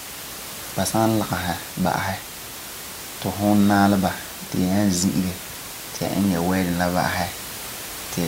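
No technical faults can be heard in this speech recording.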